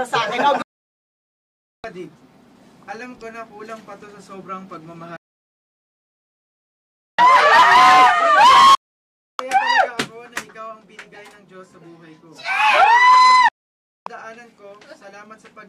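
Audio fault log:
0.62–1.84 s, 5.16–7.19 s, 8.75–9.40 s, 13.48–14.07 s, digital broadcast dropout: the receiver mutes bad frames with a 3 ms fade, giving clean silent holes rather than concealment or glitches, and the programme resumes further on.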